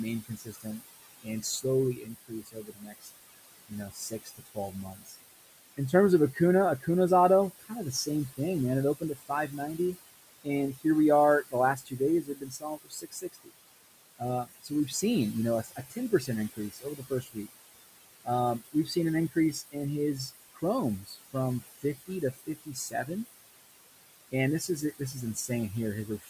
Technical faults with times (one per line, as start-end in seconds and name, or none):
0.00-26.29 noise suppressor artifacts
0.22-23.09 speech cut by the noise suppressor
24.32-26.29 speech cut by the noise suppressor